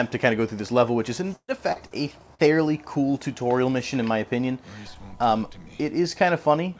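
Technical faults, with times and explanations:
1.36 to 1.51 s, burst of packet loss: roughly 120 ms of audio never arrived. The receiver stretched the last sound for about 122 ms, letting it fade into a held buzz or hiss with some 60 ms of near silence, then skipped ahead past the missing stretch.
1.72, 1.88 and 2.35 s, short concealed packet loss: three separate drops of about 40 ms each (1.72 to 1.79, 1.88 to 1.94, 2.35 to 2.42 s). Each was patched with 30 to 41 ms of continued sound, so you hear a quick smear or wobble, and a brief sound can disappear.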